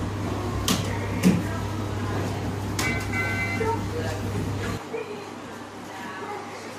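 At 4.77 s the input was likely switched to a poorer device, with no gap at the switch. From there to the end, nothing sounds above 12.9 kHz, the level drops by roughly 10 dB, and a new, faint noise floor sits well below the sound.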